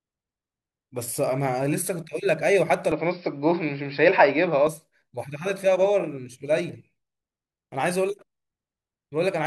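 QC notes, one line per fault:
2.92–4.67 s, input switched to a poorer device: capture likely jumped to a narrower-band input, so speech turns dull and boxy with nothing above 5.5 kHz, a level shift of about 5 dB and faint new noise, then clears.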